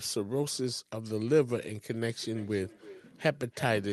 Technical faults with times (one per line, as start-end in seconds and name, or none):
2.09-3.93 feedback echo between two devices